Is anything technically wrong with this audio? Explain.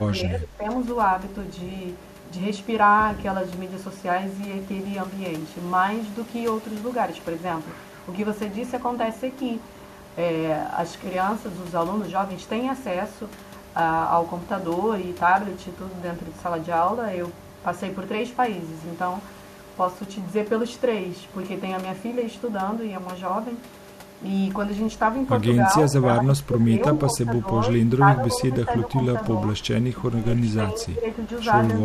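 Yes. The speech repeatedly dips in level, by roughly 10 to 15 dB at its deepest, in short patches from 0.0 to 0.66 s, 25.89 to 26.8 s, 27.07 to 27.68 s, 27.99 to 29.62 s and 29.95 to 31.11 s. Within each stretch only part of the time is pulled down. This is likely speech suppressed in double talk: with both sides talking at once, the echo canceller couldn't tell the near talker from the loudspeaker echo and turned them down together.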